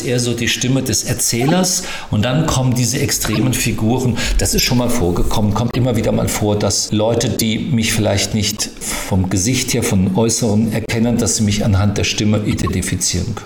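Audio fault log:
1.38 to 12.69 s, corrupt frame decoded, eight times: 1.38–1.51, 3.29–3.44, 4.51–4.65, 5.67–5.77, 7.37–7.43, 8.50–8.60, 10.86–10.90 and 12.51–12.69 s. Each time, a short run of damaged compressed frames, from two or three up to about seven, is played rather than concealed. Flipped bits make the decoder misread gains and spectral codes, so energy lands at the wrong frequencies. The sound breaks into a brief chirp or noise burst lasting about 50 to 180 ms.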